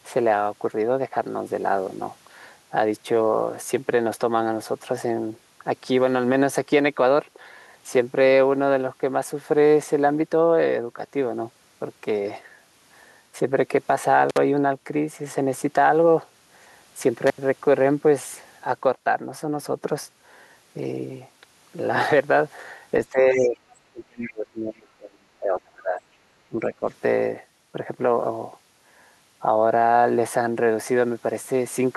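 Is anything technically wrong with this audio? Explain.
Yes, there are three kinds of fault. Intermittent contact at 14.30 and 17.27 s: a loose connection opens for about 53 and 81 ms, so the sound drops out with crackle at each edge.

Speech suppressed in double talk at 23.12–23.58, 23.92–26.0 and 26.47–26.85 s: the talker dips by roughly 15, 30 and 20 dB, likely because the echo canceller attenuated both sides during overlap.

The other side's voice leaking through at 23.71–23.76 s: a brief, faint scrap roughly 35 dB below the speech, likely echo residue the canceller left in the microphone signal.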